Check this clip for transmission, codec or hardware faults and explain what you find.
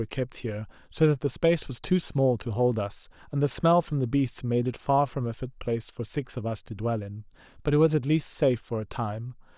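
Nothing in this speech recording points to a transmission, codec or hardware problem; there's nothing there to flag.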